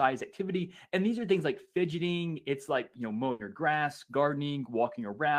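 Speech, with a burst of packet loss from 3.31 to 3.41 s. Roughly 80 ms of concealment stretches and fades the last received sound into a held buzz or hiss, then playback resumes with about 80 ms of the original audio skipped.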